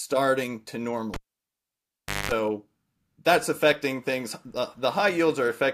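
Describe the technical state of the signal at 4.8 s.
At 4.8 s the speech signal is intact, with no audible fault at that moment.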